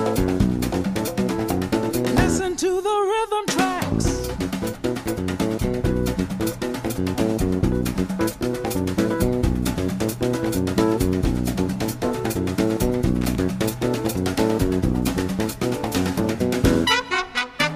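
A brief, irregular burst of crackle and scratching cuts through the audio from 13.21 to 13.35 s, with the signal chopped into fragments. This is loose connector crackle: a worn or dirty contact rapidly making and breaking as it shifts.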